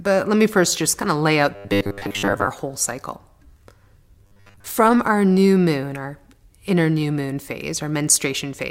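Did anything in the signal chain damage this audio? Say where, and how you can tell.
Yes. From 1.54 to 2.50 s and again from 4.23 to 4.64 s the speech turns into a rigid, metallic robotic sound from repeated short buffers, with a fixed 100 Hz buzz that still roughly tracks the syllables. This is likely a driver or buffer underrun: audio arrived too seldom, so a slice of about 10 ms was replayed over and over, replacing most of the real signal. Unlike codec warble, the buzz stays fixed at 100 Hz instead of following the voice.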